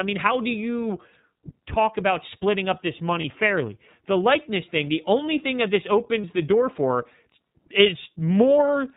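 The whole recording runs through the iLBC codec, and you can hear it. Everything above 4 kHz is gone, and the speech has a rough, slightly synthetic edge. The damage is plainly audible, which fits the 13.33 kbps mode with 30 ms frames.

Two short dropouts follow, from 3.21 to 3.25 s and from 6.21 to 6.24 s. Both are lost iLBC frames, each gap about the length of a single 30 ms frame. The decoder fills each hole by repeating the last pitch cycle mixed with noise, so you get a brief buzzy, held-vowel smear. Normal speech returns right after, since each iLBC frame decodes independently.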